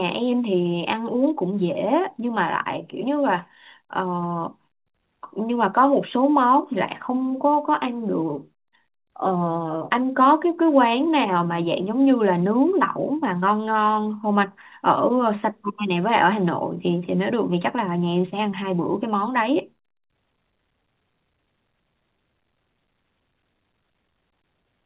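No technical faults occur in this speech, which comes through a call path with nothing above 4 kHz, as fits a G.711 A-law codec.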